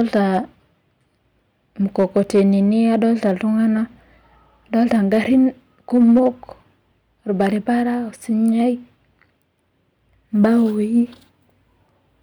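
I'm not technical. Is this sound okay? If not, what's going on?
No. Hard clipping crackles on the loudest moments of the speech at 0.00–0.39, 1.99–2.45, 2.95–3.31, 4.78–5.38, 5.95–6.28, 7.41–7.46 and 10.44–10.57 s. Those peaks were too big for the recording chain, so their tops were sliced flat, adding a rough, gritty edge.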